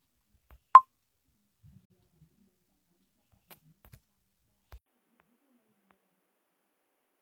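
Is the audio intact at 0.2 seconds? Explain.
Yes, at 0.2 seconds the audio is intact, with no dropout, click, distortion or other fault to be heard at that point.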